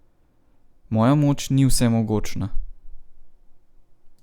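No technical faults can be heard anywhere in this speech recording. There is nothing to place on a timeline.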